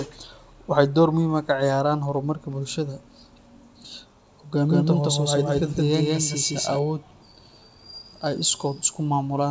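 From 4.65 to 6.79 s, an equally loud copy trails the speech by about 150 ms and cuts in and out abruptly. This doubled audio track likely comes from a slower second capture.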